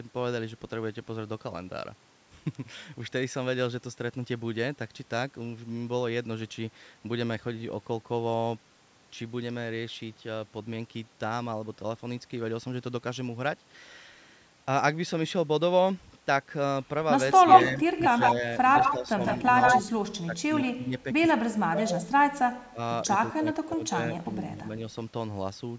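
From 17.33 to 19.81 s a second copy of the speech trails the original by 156 ms, roughly as loud as the speech itself, giving a doubled, smeared sound. A much fainter trace returns from 20.61 to 21.0 s at the same delay. This is echo leak: the far end likely plays the call over a loudspeaker, and its echo canceller let what its microphone picked up travel back down the line.

Overlapping that echo, the speech itself dips in short bursts. It drops slightly from 17.35 to 17.78 s and more noticeably from 18.35 to 19.2 s. From 19.82 to 22.1 s it falls away sharply in patches, totalling well over a second, nearly to silence at worst. It dips moderately again from 22.72 to 24.69 s. This is speech suppressed in double talk, likely the echo canceller mistaking talk from both sides at once for echo and turning the speech down along with it.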